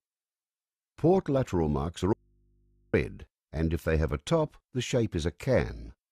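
At 2.13 s the sound drops out abruptly for about 0.81 s, leaving only faint hum, roughly 40 dB down, until 2.94 s. This is an audio dropout to a faint residue, likely a live but disconnected input.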